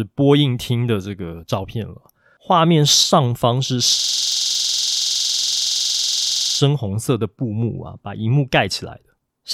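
From 3.99 s to 6.60 s the speech collapses into a machine-gun stutter, one 46 ms fragment repeating exactly 21.5 times per second. This is a system hang loop: the system froze while the sound hardware kept replaying its ring buffer, which fits a 2048-sample buffer.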